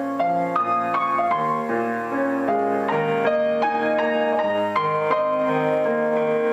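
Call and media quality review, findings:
No faults found: the signal stays continuous and stable, with no dropouts, level jumps or timing irregularities at any point.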